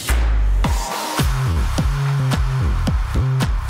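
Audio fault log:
1.51 to 1.58 s, short stall from a late packet: a packet arrived late enough that the jitter buffer emptied, so the receiver held the last sound for about 48 ms instead of going silent, then carried on from exactly where it stopped. Nothing is lost, but the sound hangs briefly with a faint buzzy or dipped quality, and everything after runs 48 ms later. On a spectrogram the harmonics flatten into a short horizontal smear; the waveform shows a brief repeating, slightly sagging stretch.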